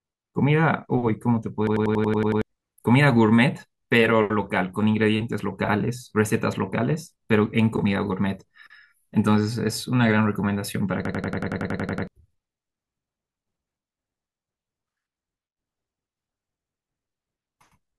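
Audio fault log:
1.67–2.42 s: system hang loop. A 93 ms slice repeats eight times at 10.8 Hz, a machine-gun stutter from the hardware replaying one stuck buffer (this fits a 4096-sample buffer), losing about 0.7 s of speech.
11.05–12.07 s: system hang loop. The same 93 ms stutter repeats eleven times at 10.8 Hz while the frozen system lets the ring buffer cycle, losing about a second of speech.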